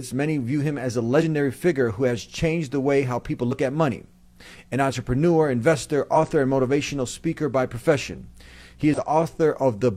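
Damaged data in a compressed stream at 1.17–1.23, 3.48–3.52, 6.12–6.17 and 8.94–8.99 s. Corrupt bytes break decoder sync. Each gives a brief chirp, squawk, click or short hole.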